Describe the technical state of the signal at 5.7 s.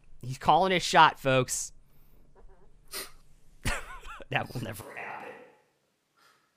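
At 5.7 s the speech is on a switch to a distant microphone, from 4.82 s to the end: suddenly roomy and hollow, thinner, about 5 dB quieter, likely because the close mic dropped out.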